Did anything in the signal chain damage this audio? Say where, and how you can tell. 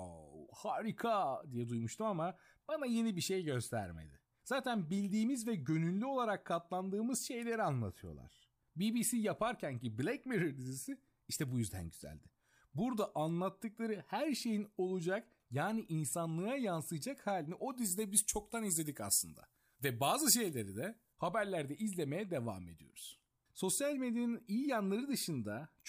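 Yes. Pre-emphasis left on from 17.71 to 21.13 s: the speech turns thin, bright and sibilant, with treble about 14 dB hotter at 10 kHz than at 1 kHz. That matches an FM 75 µs boost whose matching de-emphasis was skipped.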